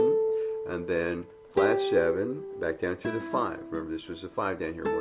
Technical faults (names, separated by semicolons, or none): none